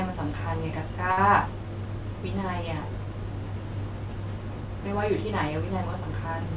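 At 1.12 s there's a short stall from a late packet, running to about 1.19 s. A packet didn't arrive in time, the jitter buffer ran dry, and the receiver stretched the last bit of speech for 54 ms until the data showed up, then picked up where it left off. Nothing's actually lost, but that sound hangs a touch too long with a faint buzzy wobble, and everything after lands 54 ms later. The band stops at 4 kHz throughout, which fits G.711 A-law at 64 kbps.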